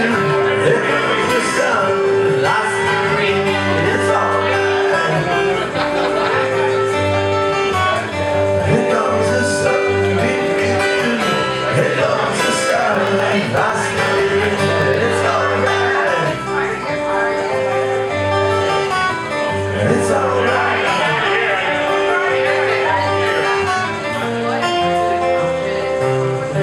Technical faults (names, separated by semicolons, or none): periodic USB or driver dropouts